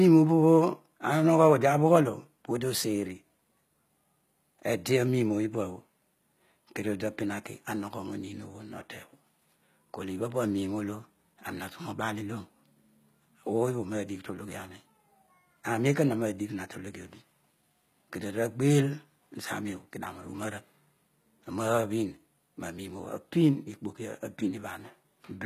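Speech with HE-AAC compression throughout, plainly audible: the treble sounds gritty, with lispy, metallic s sounds, likely from band replication rebuilding the highs at a low bitrate near 20 kbps. A spectrogram shows smeared, copied-looking upper bands and nothing above 14.9 kHz.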